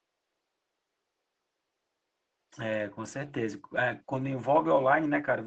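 No technical faults can be heard in this speech clip. A faint room noise sits in the background, about 52 dB below the speech.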